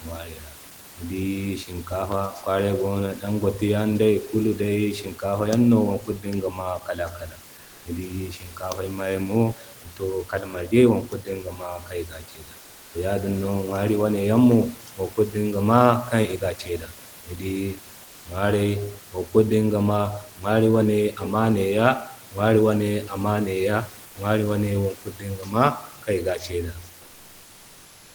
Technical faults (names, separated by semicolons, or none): comfort noise in place of the background